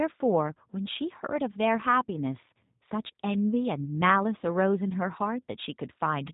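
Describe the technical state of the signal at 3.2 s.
At 3.2 s the speech carries G.729 codec damage, as it does for the whole clip. The codec discards the waveform and rebuilds each 10 ms frame from a vocal tract filter, a pitch predictor and a few pulses. That coarse rebuild sounds rough and synthetic here, and the damage is plainly audible. Nothing above 3.8 kHz survives, so the top end is dull. This fits an 8 kbit/s G.729A stream.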